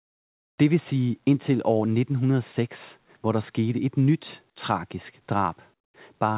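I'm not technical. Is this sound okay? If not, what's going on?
No. Just after "skete et nyt tragisk", from 5.74 to 5.94 s, the room background is briefly replaced by a flat, featureless hiss that is much quieter. This is comfort noise in place of the background, likely because the call system stopped sending sound and filled the gap itself. Unlike a plain dropout, the gap isn't silent.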